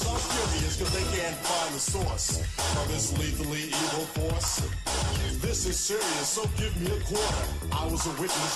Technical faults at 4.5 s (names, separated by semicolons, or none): bit error spike